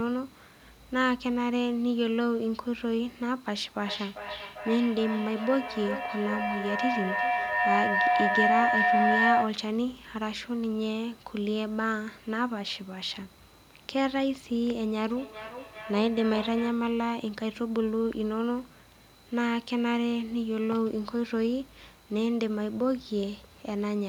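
From 3.79 to 9.68 s there is a feedback howl. Two devices in the same room share the call. Sound leaves one loudspeaker, enters the other microphone, and returns louder on each pass. The repeats grow and narrow to a single tone near 700 Hz. That tone peaks at about 3 dB above the speech. It pulses roughly every 0.4 s, the time one trip round the loop takes.

From 15.16 to 16.88 s a feedback echo between two devices appears. One device plays what the other's microphone picked up. That microphone hears it again. Neither echo canceller removes sound from the other device's speaker. Each sound returns about every 0.4 s, sitting about 12 dB below the speech. Each pass is thinner and more ringing. Here the loop is weaker, so the repeats die away instead of building.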